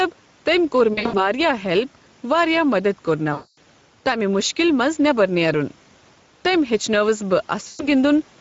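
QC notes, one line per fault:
throughout: gain pumping. Level swings by about 5 dB, likely a fast limiter riding an over-high input gain.
throughout: Speex codec. Speech sounds noisy and hoarse at a rate that fits about 16.8 kbps, with a thin excitation and noise-like fill above 4 kHz.
0.93–1.23 s: VoIP packet loss concealed by the speech codec. After "تٔمۍ کوٚر", the speech is stretched into a fading buzzy tone or coloured noise; the gaps are scattered across 200 ms, the longest about 60 ms, and the decoder extrapolates its last pitch and filter.
3.33–3.58 s: VoIP packet loss concealed by the speech codec. After "واریاہ مَدد", about 240 ms is stretched into a decaying tone or coloured noise, staying weak briefly after recovery.
7.67–7.88 s: VoIP packet loss concealed by the speech codec. About 120 ms dissolves into a fading buzzy tone or coloured noise as concealment extrapolates and lowers gain frame by frame.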